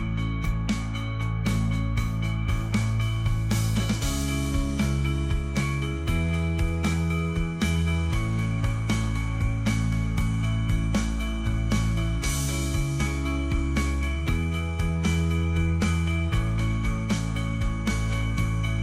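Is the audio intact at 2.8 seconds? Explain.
Yes, the audio at 2.8 seconds plays through cleanly, with no dropout, click, distortion or other fault at that moment.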